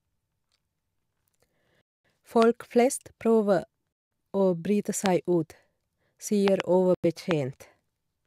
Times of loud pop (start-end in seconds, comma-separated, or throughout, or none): 2.42-2.44, 5.06-5.08, 6.48-6.62, 7.31-7.33